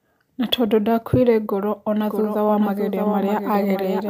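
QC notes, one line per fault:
2.01 s to end, doubled audio track: after "tondũ ndakuire ngoro" a second copy of the speech is likely being mixed in from a slower capture path or a misaligned edit, running roughly 0.7 s behind the original at about 5 dB lower. It switches in abruptly and carries the full band with no decay or room colour. So each phrase is followed by a clean, quieter repeat that overlaps the next, smearing the speech into a stuttering double track.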